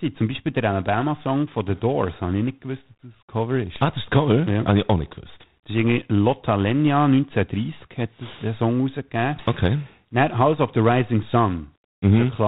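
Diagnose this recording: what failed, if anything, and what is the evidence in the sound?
The failure is at the codec stage: G.726 ADPCM runs across the whole recording, from start to finish. The speech carries a harsh, rasping hiss that rises and falls with its level, which fits 24 kbit/s, or 3 bits per sample. Each sample stores only a coarse difference from an adaptive prediction, so quantisation noise tracks the signal. On a spectrogram, energy stops sharply at 4 kHz, and grainy broadband noise fills the speech bands wherever speech is present.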